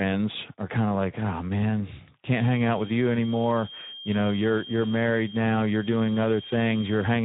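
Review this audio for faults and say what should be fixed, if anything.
Speex codec damage runs through the whole clip. The speech sounds hoarse and grainy because this CELP coder has too few bits to rebuild the excitation faithfully, and the harshness fits a setting of around 11 kbps. Nothing is present above 3.8 kHz, so sibilants and breath lose their upper detail and the speech sounds muffled and boxy. To prevent it, encode at a higher Speex quality or use a modern wideband codec such as Opus.

A feedback whistle starts at 2.31 s, right after "of like oh man", and continues to the end. A thin, steady tone at 3.2 kHz sits about 20 dB below the speech, swelling and fading slowly in level. Its likely cause is a loudspeaker-to-microphone loop held just at the edge of feedback, so one frequency keeps ringing without running away. To prevent it, lower the monitor gain, use headphones, or notch 3.2 kHz in the monitoring path.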